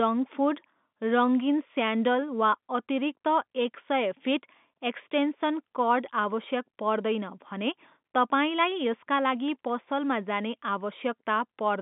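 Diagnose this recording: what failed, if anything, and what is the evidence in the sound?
Nothing failed; no fault is audible anywhere in this recording.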